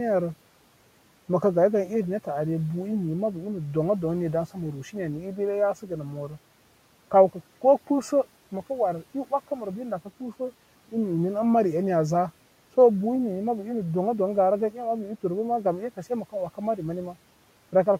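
At 5.74 to 5.91 s the speech is cut by the noise suppressor. It misjudges part of the speech as background and pulls it down by up to about 8 dB, so around a tenth of a second of sound goes faint and swallowed, with the quiet room noise, sitting about 25 dB below the speech, dipping along with it. A dropout would go silent, but here the sound is only weakened.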